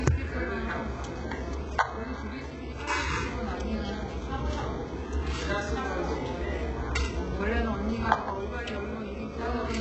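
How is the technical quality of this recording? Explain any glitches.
Technical quality is poor, with heavy codec damage throughout and an interfering tone at the end.

Throughout, the treble is synthetic and gritty, with nothing above 8 kHz; this is likely HE-AAC compression, whose band replication rebuilds highs from lower bands, consistent with roughly 8 kbps.

From 7.53 s to the end, timecode bleed adds a faint chirping warble switching near 1 and 2 kHz, well below the sound, fitting 25-frame linear timecode leaking from an adjacent line.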